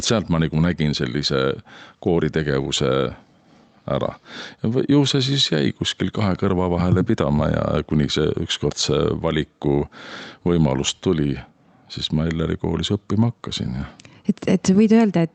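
Gain pumping runs through the whole speech clip: the gain swings by roughly 5 dB, pulled down whenever the talker gets loud, so everything sounds squashed. The likely cause is input gain set far too high, with a fast limiter clamping each peak. The call-codec top end, stopping around 8 kHz, is a separate matter.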